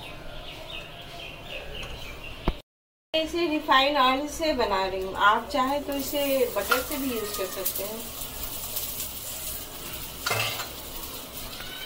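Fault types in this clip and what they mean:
Damaged data in a compressed stream: bad bytes from 11.45 to 11.47 s knock the decoder out of sync, giving a quick glitch.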